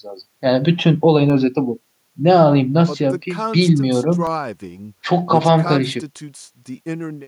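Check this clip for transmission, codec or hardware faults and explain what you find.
Two brief dropouts occur in this speech, both underruns with a held sample. At 1.30 s and again at 4.27 s the sound freezes flat for 0.67 ms and then 1.33 ms. The output buffer ran dry, fitting 32- and 64-sample shortfalls, and the converter held its last value. Live audio was lost meanwhile (about 0.7 and 1.5 milliseconds), so the restart jumps.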